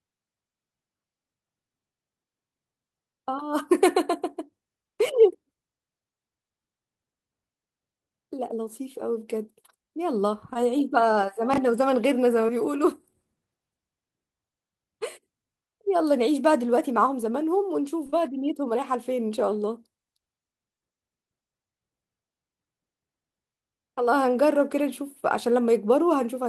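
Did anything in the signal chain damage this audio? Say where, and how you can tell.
Yes. Short concealed packet loss at 10.53, 12.47, 18.06 and 18.10 s: about 20 ms gaps in this speech, filled by extending the preceding sound, heard as brief smears.

Chunks out of order at 11.54 s (one 20 ms chunk late) and 22.59 s (three chunks late): network delivery played audio in the wrong sequence, audible as a jumbled moment.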